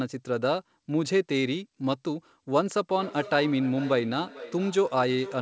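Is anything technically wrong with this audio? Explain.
Yes. From 2.96 s to the end, there is feedback echo between two devices. Two devices on the same call are close enough that one device's speaker output reaches the other's microphone and is sent back. Each device's echo canceller only removes its own playback, so this loop passes through. The speech returns roughly every 400 ms as a thinner, ringing copy, peaking about 16 dB below the direct speech.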